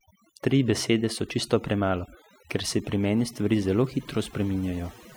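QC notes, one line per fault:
Throughout: overdone noise removal. The noise reduction was pushed too hard, so frequency bands near the noise estimate get cut away. Quieter parts of the speech vanish with them. The background drops and breaks up into twinkling specks.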